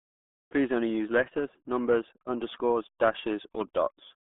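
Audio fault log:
throughout, RealAudio 14.4 codec: the speech has passed through a very low-rate dial-up codec that keeps only a narrow telephone-like band of roughly 200 Hz to 3.5 kHz, and nothing survives above 3.8 kHz. The heavy coding damage sounds consistent with RealAudio 1 at around 8 kbit/s. Losing the upper band leaves the speech muffled and dull, and the coarse coding adds a gargly, bubbling roughness to the speech.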